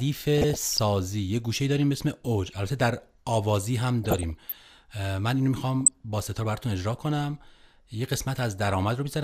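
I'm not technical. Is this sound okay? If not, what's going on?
No, there's a problem. At 0.38 to 0.79 s, 4.04 to 4.54 s and 5.81 to 6.00 s the speech picks up short blips of noise, which is DAB burbling. Weak digital radio reception let a small share of corrupted data slip past the error correction, so for a split second parts of the sound are disturbed by these blips.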